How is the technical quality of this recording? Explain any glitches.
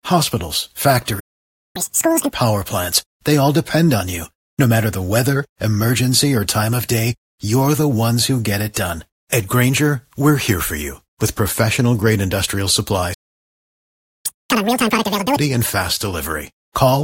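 The recording has two dropouts in playback, each followed by a stretch of fast, high-pitched speech.

Playback stall at 1.19 to 1.76 s and again at 13.14 to 14.26 s: the speech cuts to silence for about 0.55 s and then about 1.1 s. The likely cause is the player running out of buffered data or its thread being blocked.

Catch-up at higher speed at 1.76 to 2.31 s and 14.26 to 15.37 s: right after each stall, the player resamples its backlog at 2x speed to recover lost time. The speech sounds hurried and raised by roughly ten semitones, then snaps back to normal.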